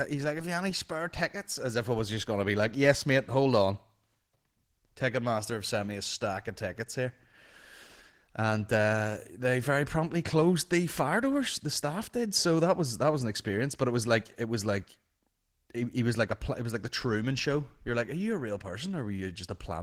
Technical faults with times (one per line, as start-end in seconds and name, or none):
0.00-19.83 Opus voice compression